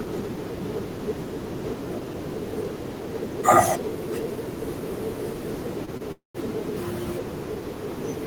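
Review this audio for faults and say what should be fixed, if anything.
Two short stalls from a late packet, at 5.85 to 5.89 s and 5.97 to 6.02 s: the jitter buffer ran dry, so the last sound got held for 19 and 24 ms, with nothing lost.

Then a call audio freeze from 6.12 to 6.36 s: the sound trails off as a fading buzz and goes silent for about 140 ms. It's likely a 228 ms burst of held-up packets, with nothing skipped once playback resumes.

A deeper or adaptive jitter buffer on the receiving end should absorb this kind of network delay.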